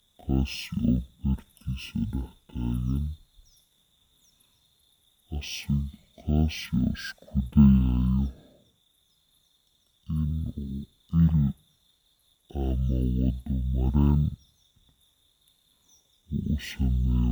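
From start to finish the speech suffers from stereo read as mono: left and right samples were taken in turn as one channel, so everything runs at half speed and an octave low. A spectrogram shows compressed harmonics plus a fainter mirrored copy across the upper half.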